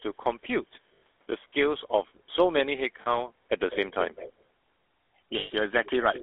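Throughout, the GSM full-rate codec rebuilds the speech from a vocal-tract model driven by coarse pulses, which fits a 13 kbps full-rate coder. The result is a buzzy, gravelly roughness squeezed into a 300 Hz to 3.5 kHz line band.

At 0.94 to 1.02 s, lost GSM frames are covered by repeating the last good frame. This holds the sound for about 80 ms as a rough, metallic ring. The same thing happens at 3.02 to 3.22 s.

From 3.93 to 4.43 s, a loudspeaker-side echo canceller likely failed to remove everything, producing an echo leak. A copy of the speech trails about 0.2 s behind, clearly quieter than the original.

At 5.38 to 5.51 s, more lost GSM frames stretch the metallic hold to about 120 ms.

At 5.85 to 5.9 s, a brief, very faint echo scrap returns with the same 0.2 s delay.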